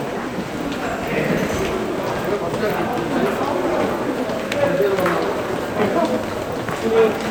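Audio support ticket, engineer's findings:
No audible fault found anywhere in the sound recording. No component flagged and no mechanism to trace.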